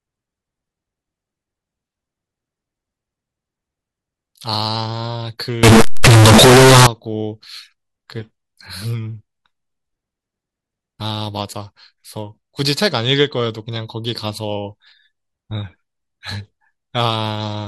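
From 5.63 to 6.87 s the speech turns into a harsh, loud buzz with background noise as loud as speech, yet pitch stays traceable. The likely cause is float read as integer, 32-bit float samples decoded as 32-bit integers, leaving a near-square waveform at an almost fixed, high level and broadband smearing on a spectrogram.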